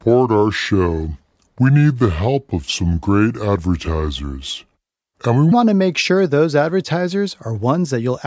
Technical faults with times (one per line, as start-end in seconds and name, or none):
0.00-5.52 wrong sample rate